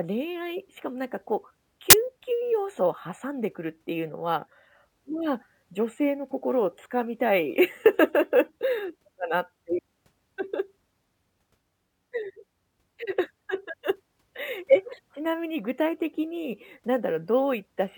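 A speech recording with one fault: file tags played as audio, heard as a sudden burst of harsh static from 1.90 to 1.93 s. The data being read as samples is compressed, most plausibly an embedded cover picture, so the output is effectively random values: very loud white noise with hard on and off edges. On a waveform it shows as a solid, very loud block. On a spectrogram it appears as a narrow vertical band filling every frequency evenly, with sharp vertical edges.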